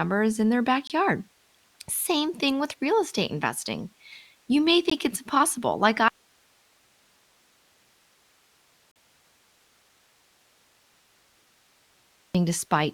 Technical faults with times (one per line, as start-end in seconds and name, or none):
0.87-0.90 gap between stream segments
4.90 gap between stream segments
6.08-12.35 audio dropout to a faint residue
8.91-8.96 gap between stream segments